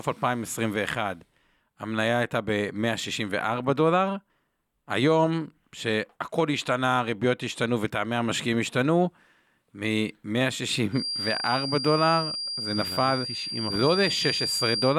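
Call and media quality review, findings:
Thin, steady whistle near 4.8 kHz, slowly swelling and fading in level, sitting a few dB under the speech from 10.90 s to end of clip at 14.99 s. Feedback whistle; likely speaker-to-mic loop held right at onset, ringing without running away.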